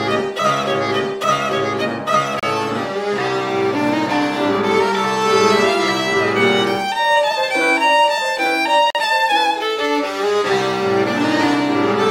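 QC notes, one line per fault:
2.40–2.43 s and 8.90–8.95 s: Bluetooth stall. The sound cuts to silence for 32 ms, then 45 ms, and resumes where it stopped or slightly later. The likely cause is interference delaying wireless packets. The headphone buffer ran dry until the resent packets arrived.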